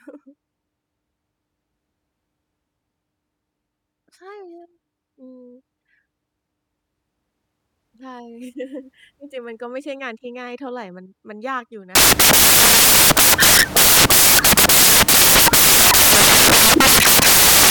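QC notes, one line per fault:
11.95–17.70 s, samples built from the wrong bytes: from here to the end the speech turns into loud, harsh broadband noise, close to white on the louder sounds, because each sample is assembled from misordered or misaligned bytes so the rapidly changing low bits dominate.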